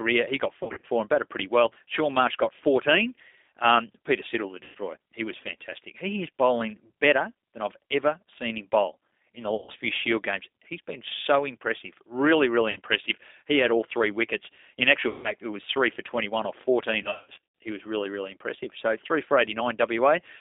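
Speech heard through a narrow, slightly rough and synthetic band of roughly 250 Hz to 3.7 kHz, the mark of the 8 kbit/s G.729 codec modelling the voice from filter and pulse parameters. Buzzy or noisy, smeared dropouts that fade and leave the voice weak occur at 0.63 to 0.85 s (between "he got" and "and batted pretty well"), 4.63 to 4.77 s, 9.55 to 9.71 s (after "him bowl in the"), 12.71 to 12.79 s, 15.09 to 15.33 s (before "it was three for") and 17.03 to 17.38 s. These are VoIP packet loss concealed by the speech codec, with the decoder stretching its last pitch and filter across the missing stretches.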